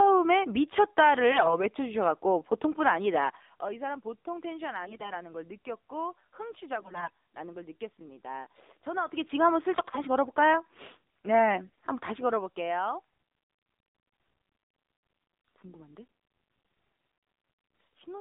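A speech clip that sounds boxed-in and buzzy from start to finish, with the band running only from about 250 Hz to 3.7 kHz and a synthetic, reedy edge on the voice. That is the AMR narrowband mobile codec. It samples at 8 kHz and rebuilds the voice from a vocal tract model fed by a pitch predictor and a few pulses per 5 ms. The plainly audible coarseness points to a low mode around 7.4 kbps. In five short bursts the voice keeps its pitch and level but turns hoarse, scratchy and gargly: 1.32 to 1.58 s, 4.84 to 5.13 s, 6.80 to 7.10 s, 9.78 to 10.06 s and 11.66 to 11.87 s. These are AMR bit errors. Less protected bits in the frames arrived flipped while the check on the key bits still passed, so the driving pulses landed in the wrong places and the finer pitch, gain and spectrum values went astray. The damage fits an error rate of around a tenth of the bits, rising towards 15 percent in the burst near 5 s.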